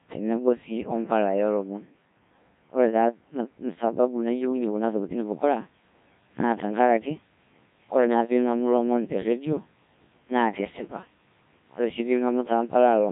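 A speech recording passed through a Codec 2 vocoder for its whole length, and the heavy damage fits a rate of about 1.3 kbit/s. Unlike an ordinary lossy codec's smeared or swirly artefacts, the voice sounds robotic and buzzy because it is rebuilt from sine waves using only pitch, voicing, energy and envelope, so the original waveform is gone. From 5.12 s to the end, pre-emphasis was left on, following the FM 75 µs curve. Treble rises steadily to about 13 dB above 1 kHz at 10 kHz, making the voice thin and sibilant. The sudden switch at 5.12 s and the rising slope set it apart from a fixed treble shelf.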